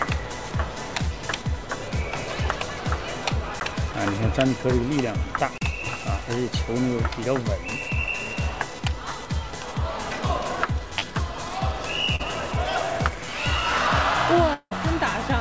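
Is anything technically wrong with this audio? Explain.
Yes, there are three kinds of fault in this call audio, which arrives through a G.722 path with nothing above 8 kHz.

At 3.60 s there is a sharp tick, and at 5.58 to 5.61 s a short hole. These are blocks of digital silence: samples replaced by zeros with no fade. The first lasts about 12 ms, which fits a 512-sample buffer that was not filled in time. The second lasts about 35 ms.

At 3.92 to 3.95 s, 10.99 to 11.04 s and 12.16 to 12.21 s the sound briefly smears and wobbles. This is short concealed packet loss. Between 20 and 40 ms of audio never reached the decoder, and the receiver stretched the preceding sound over each gap before blending back into the real signal.

From 14.53 to 14.73 s the sound turns into a fading, synthetic-sounding continuation, then drops to about 60 ms of silence before returning with a section missing. The likely cause is a long network dropout: roughly 180 ms of audio failed to arrive, and concealment filled most of that time before giving out.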